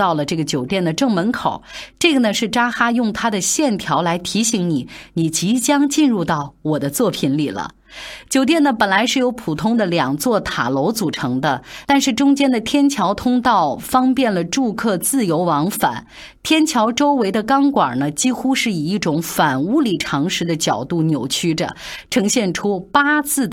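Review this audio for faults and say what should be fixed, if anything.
No faults; nothing needs fixing.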